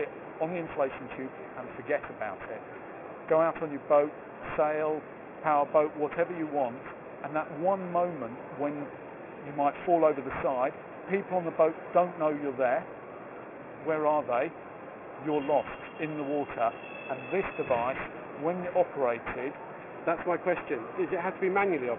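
Aliasing runs through the whole clip. The audio was brought down to a much lower sample rate without first filtering out the high frequencies. The sound points to a drop from 44.1 kHz to about 6 kHz. Everything above the 3 kHz folding point mirrors back down to false, unrelated pitches. These foldovers sit roughly 20 dB below the wanted sound. They add a gritty, metallic edge. The spectrum runs hard right up to 3 kHz.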